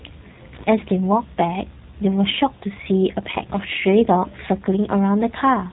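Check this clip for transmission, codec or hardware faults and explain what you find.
One codec fault runs through the whole clip. G.729 codec, throughout: the speech is rebuilt from a vocal-tract filter, pitch predictor and sparse pulses, which fits 8 kbit/s coding. It sounds plainly rough and synthetic, with nothing above 3.8 kHz.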